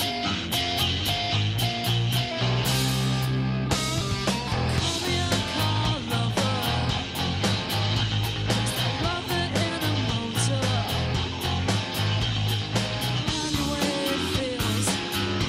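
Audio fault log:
No audible faults detected anywhere in this clip.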